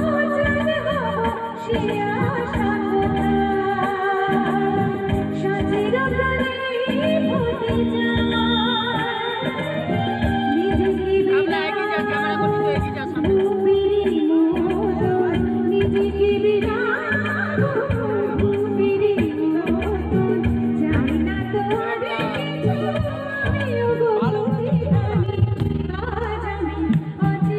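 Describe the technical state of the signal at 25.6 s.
Overlap-add ripple runs from 25.26 to 26.25 s. Frames rejoin with uneven overlap, so level dips about 11 dB around twenty times a second, a rough flutter.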